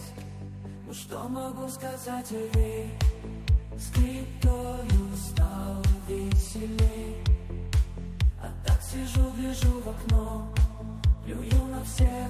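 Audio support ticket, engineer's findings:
No audible faults found; nothing to escalate.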